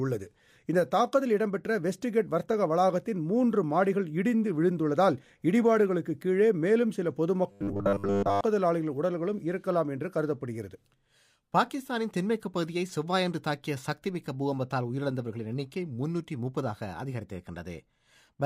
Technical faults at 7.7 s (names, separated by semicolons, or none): robotic sound from repeated short buffers